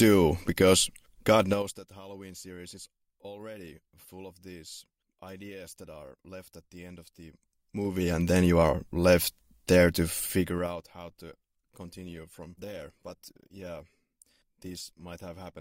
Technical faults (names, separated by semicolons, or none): zipper noise; adaptive stream at a lower bitrate